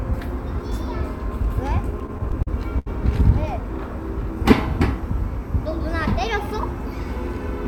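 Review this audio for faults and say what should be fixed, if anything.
Between 1.91 and 2.88 s there's a run of repeated stalls (stutter), eight small hitches in under a second. Packets were turning up late, so the jitter buffer kept draining, and each time the receiver stretched the last bit of sound to cover the hole, about 167 ms in total, with the longest gap 75 ms. Nothing's actually lost, but the audio drags and stutters. Give the jitter buffer more headroom so late packets don't drain it.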